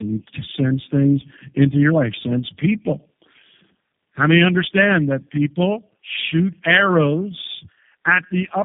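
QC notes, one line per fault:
Throughout, tandem speech coding: the speech is rough, muffled and warbly, with nothing above 3.7 kHz, because it passed through three low-rate speech coders in a row, each re-coding the previous one's damage. The texture fits two AMR-NB stages at 7.95 kbit/s and a final G.729A stage at 8 kbit/s. A single codec pass or a plain narrowband filter would sound thinner but clean, not this compounded gargly smearing.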